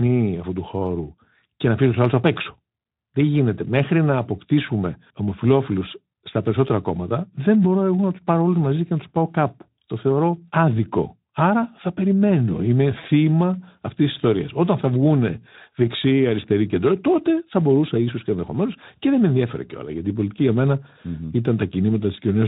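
At 6.11 to 6.13 s the speech briefly smears into a short buzzy tone or coloured noise that fades. At 12.99 to 13.06 s a longer version sounds, and the voice stays thin for a moment afterwards. This is VoIP packet loss concealed by the speech codec. The gaps suggest one and then two lost 20 ms frames, about 20 ms and 40 ms. The light Speex coding at 15 kbps rebuilt each gap from its last pitch and filter while lowering the gain.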